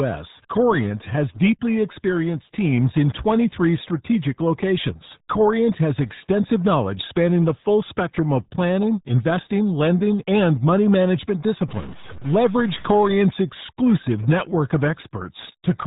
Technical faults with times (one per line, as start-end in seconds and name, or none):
0.00-15.86 RealAudio 14.4 codec
11.68-13.16 stuck bit